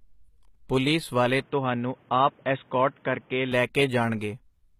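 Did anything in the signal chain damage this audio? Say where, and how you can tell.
Yes. At the codec stage, the likely cause is HE-AAC compression: gritty, metallic sibilance and nothing above 14.9 kHz throughout, which fits replicated treble at roughly 20 kbps.

At the input stage, right after "ਪੁਲੀਸ ਵਾਲੇ", an input switched to a poorer device is likely from 1.42 to 3.52 s. With no gap, the band stops at 3.8 kHz, level drops about 5 dB, and faint new hiss appears.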